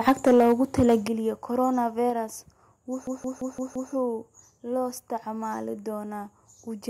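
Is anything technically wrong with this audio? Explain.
Yes. Microphone overload, 0.07 to 0.95 s: peaks hit about 7 dB over the converter's limit, likely from excessive input volume, flattening a small share of samples into a harsh crackle.

Microphone volume stepped down at 0.09 s (about 2 dB), 1.08 s (about 7 dB) and 2.1 s (about 3 dB): level drops abruptly each time, likely the call software cutting input gain.

System hang loop, 3.07 to 3.93 s: a 170.67 ms piece, which fits an 8192-sample buffer, repeats five times at 5.86 Hz, a stutter from a frozen system replaying its ring buffer.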